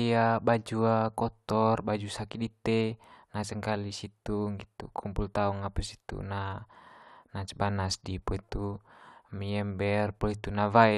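Nothing goes wrong anywhere in this bit of speech, so there's really nothing to flag.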